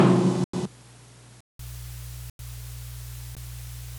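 An input switched to a poorer device runs from 0.0 to 1.59 s. The sound is dull and quieter, by roughly 10 dB, with nothing above 11.4 kHz and new background noise roughly 35 dB under the signal. This is likely another microphone or a headset call profile, and it clears after a silence of about 0.19 s at the switch.

Within that stretch, a block of digital silence cuts from 0.44 to 0.53 s. Samples were likely zeroed when the output buffer went unfilled, so a 93 ms hole opens, which fits a 4096-sample buffer.

The same 93 ms dropout recurs from 2.30 to 2.39 s.

A shorter block of digital silence at 3.35 s lasts about 16 ms and is heard as a very short hole.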